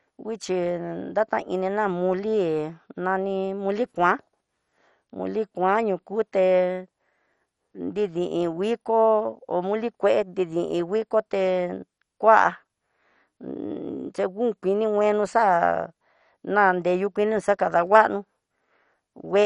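Throughout the speech, the sound is dull and gurgling: likely MP2 compression starved of bits, fitting roughly 48 kbps, so upper sub-bands drop out and coarsely quantised ones flicker. A spectrogram shows nothing above 11.3 kHz and patchy, blocky high-frequency energy.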